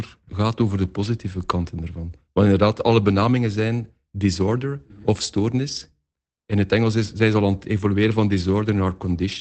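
Nothing's wrong with this speech clip; it just sounds like a normal call, with the top end stopping at around 8 kHz as you'd expect from the codec it went through.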